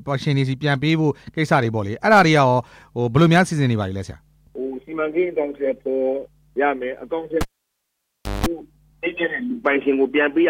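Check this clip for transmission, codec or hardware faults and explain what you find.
There's one hardware fault: a cable pulled and plugged back in, between 7.41 and 8.46 s. A live lead comes out with a pop and the sound drops to near silence for about a second. As the plug goes back in, the tip touches first and picks up an ungrounded 50 Hz mains buzz for roughly 0.18 s. A second pop follows once the connector seats fully and the audio comes back.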